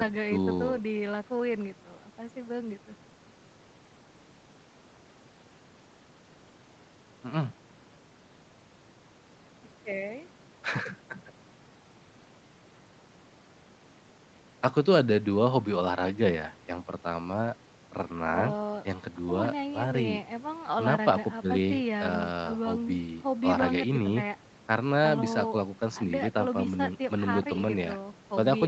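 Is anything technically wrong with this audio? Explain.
No, nothing is technically wrong with this speech clip. It carries the usual character of a call path, with no content above about 8 kHz, which fits wideband call coding.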